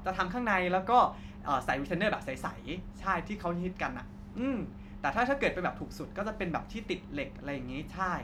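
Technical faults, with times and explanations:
Nothing technical jumps out here; the recording just runs along without any trouble worth pointing to.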